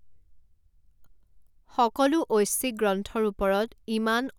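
Speech, with no audible technical faults anywhere in the recording.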